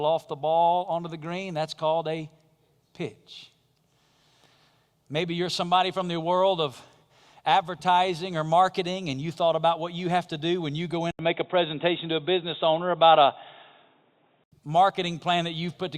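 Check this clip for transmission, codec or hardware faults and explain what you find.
One fault is present in the speech: an input switch to a poorer device, from 11.11 s to 14.52 s, just after "do when you go". An 80 ms gap opens at the switch. The level then shifts by around 5 dB, nothing is passed above 3.8 kHz, and a faint new noise floor appears, roughly 50 dB down. This is likely the capture path changing to a narrower-band microphone or headset profile. The voice sounds dull and boxy until the original input returns.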